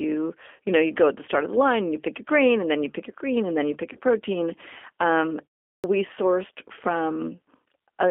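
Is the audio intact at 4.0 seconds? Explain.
No. Concealed VoIP packet loss runs from 3.93 to 3.99 s, right after "and then you pick". About 20 ms of packets went missing. The decoder extrapolated from its last pitch and filter at falling gain, giving a fading buzzy tone or coloured noise. Because each frame builds on the last, the audio at 4.0 s is still recovering.

The whole clip also carries the G.729 codec at 8 kbit/s. The line is limited to 250 Hz to 3.4 kHz. Its damage is plainly audible as rough, synthetic speech.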